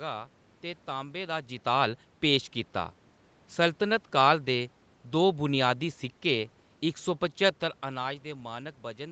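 Listening through this speech recording, nothing technically wrong stood out.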